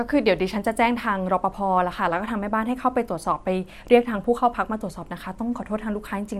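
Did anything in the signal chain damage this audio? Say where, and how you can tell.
Yes. A single sharp snap sits on top of the speech at 3.88 s, lasting two milliseconds. This is an electrical switching spike in the analogue wiring, likely from a nearby switch, motor or static discharge whose arc coupled into the line.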